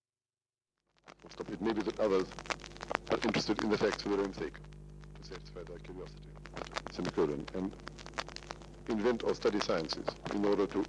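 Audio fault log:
Nothing stood out as a fault on listening.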